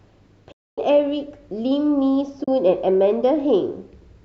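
AAC frame loss with muting cuts soft-edged holes into this speech at 0.52–0.78 s (260 ms) and 2.44–2.48 s (40 ms). The decoder silences the missing frames, and overlapping windows fade around the gaps, which fit short frames from a likely low-delay AAC-ELD stream.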